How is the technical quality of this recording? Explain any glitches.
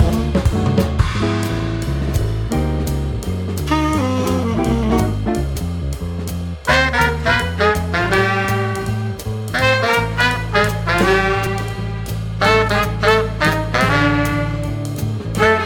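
Two brief dropouts mar the recording. At 5.55 s and 11.46 s, compressed frames are skipped. The playback jumps ahead by about a tenth of a second, consistent with losing a few frames of roughly 21.3 ms each. Each join is an abrupt jump in the audio. A spectrogram shows a thin vertical seam, and the waveform shows a discontinuity.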